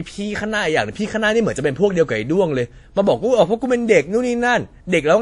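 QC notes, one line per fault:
Throughout, transcoding between lossy codecs: low-bitrate MP3-style smearing layered under WMA artefacts, likely from re-encoding. Spectrogram shows a hard ceiling near 10.5 kHz with nothing above.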